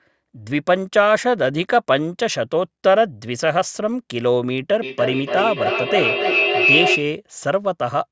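From 0.11 s to 8.11 s, faint ticks run under the speech. They come steadily, roughly every 0.07 s, around a hundred in all. This pattern points to clock slip clicks. Two devices likely ran on separate clocks that disagreed by a few hundred parts per million. Each time the drift reached a whole sample, one sample was dropped or repeated. The ticks are clearest on loud, sustained sounds and vanish in pauses.

At 4.82 s a feedback howl begins and lasts until 7.14 s. A microphone picks up a loudspeaker on the same call. Each trip round that loop adds level, so the sound grows instead of fading. It narrows to a tone around 3 kHz. Each trip round the loop takes roughly 0.3 s, the loop's delay. At its peak it is about as loud as the speech itself.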